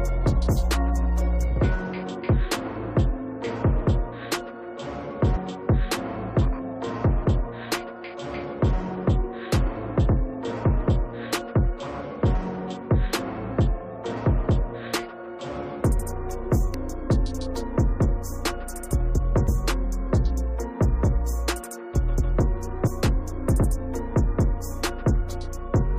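Damaged data in a compressed stream makes the decoder misread frames, lose sync and hunt for the next frame header. The result is short chirps or blips at 5.35 to 5.37 s, 16.73 s, 19.47 s and 22.86 to 22.88 s.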